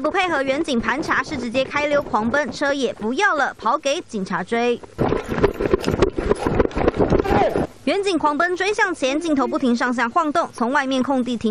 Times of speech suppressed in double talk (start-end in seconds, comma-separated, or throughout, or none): none